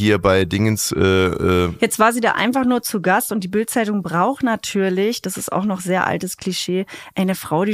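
No technical faults are audible.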